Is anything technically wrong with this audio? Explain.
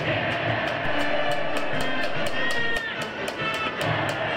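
Yes. A DC step lasting from 0.85 to 2.76 s shifts the waveform's zero line by about -25 dBFS, then returns, giving a low thump at each edge. Unlike a dropout, the sound continues unbroken throughout.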